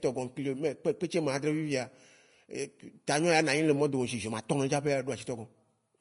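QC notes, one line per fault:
throughout Vorbis compression: likely low-bitrate Vorbis coding, fitting roughly 35 kbps, removes everything above 10.6 kHz and coarsely quantises the treble, leaving the speech grainy and hissy.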